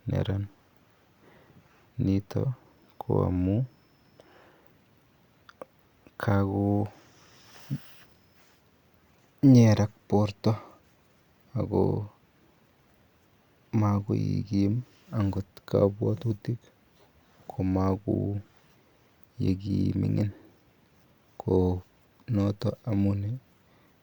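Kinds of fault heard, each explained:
No faults can be heard anywhere in this recording.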